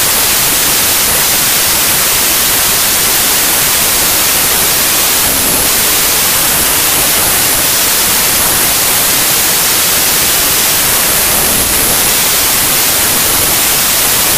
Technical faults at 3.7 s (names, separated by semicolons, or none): wrong sample width